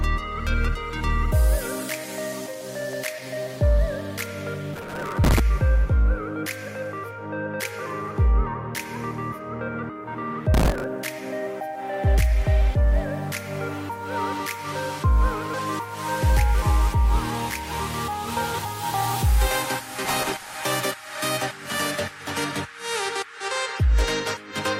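Gritty, tearing crackle rides over the sound from 4.74 to 5.40 s, from 10.54 to 10.84 s and from 20.05 to 20.63 s. This is processor overload crackle. Dozens of missed deadlines, which fits buffers of roughly 3 ms, each replayed a scrap of old audio with hard edges. At 15.54 s a brief blip marks damaged data in a compressed stream, where corrupted frames briefly threw the decoder out of sync.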